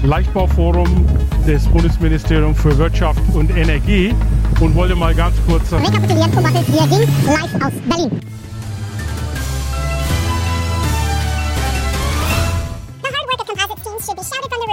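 From 5.78 s to the end, the audio is read two samples at a time: the reader takes each pair of samples as a single frame. Playback therefore runs at double speed and 12 semitones (an octave) higher.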